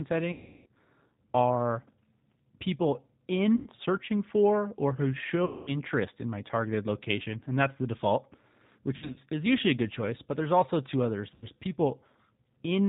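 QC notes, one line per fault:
Throughout: G.729 codec. The 8 kbit/s G.729A coding rebuilds the speech from a vocal tract filter, a pitch predictor and a few pulses per frame, so it sounds plainly rough and synthetic. A spectrogram shows a hard ceiling at 4 kHz.
0.32–0.68 s, 3.56–3.70 s, 5.45–5.75 s, 8.96–9.19 s, 11.34–11.47 s: VoIP packet loss concealed by the speech codec. About 340, 100, 220, 140 and 80 ms of audio were lost, which fits 20 ms packets. At 8.96 s the losses are scattered across about 200 ms, with the longest run 60 ms. The decoder stretches its last pitch and filter into a buzzy tone or coloured noise that fades, and speech recovers weakly afterwards. The waveform shows a smooth, decaying envelope.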